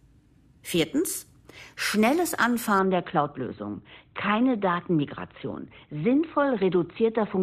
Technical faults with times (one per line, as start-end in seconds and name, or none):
2.79-7.43 adaptive stream at a lower bitrate